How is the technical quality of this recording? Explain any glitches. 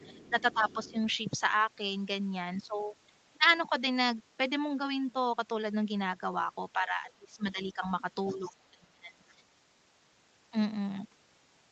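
The recording has two kinds of call-processing glitch, each occurring more than once. A faint second voice bleeds into the track, and the main talker is pushed down in level while both sides overlap. The top of the spectrum ends at 8 kHz, which fits an Opus call path, and the lowest bass is trimmed by the microphone high-pass.

The other side's voice leaking through is heard from 0.0 to 0.91 s, briefly at 7.64 to 7.69 s, and again at 8.26 to 8.38 s. Its level sits roughly 20 to 30 dB under the main speech, so it comes across as a faint background voice. The likely cause is the far end playing from a loudspeaker, with the echo canceller failing to remove all of it from the microphone. On a spectrogram, this shows as a weak, separate harmonic pattern beneath the main talker's.

Speech suppressed in double talk occurs from 0.3 to 0.97 s, 6.74 to 7.83 s, and 8.34 to 9.25 s. Each of these overlaps or sits close to the leakage. 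The talker's level sinks by about 10 dB in the first stretch, about 20 dB in the second, and about 25 dB in the third, which sounds like the voice ducking or partly cutting out. The likely cause is the echo canceller being unable to separate the local voice from the echo, so it turns everything down. On a waveform, this appears as sudden dips in the envelope, and on a spectrogram the upper harmonics fade.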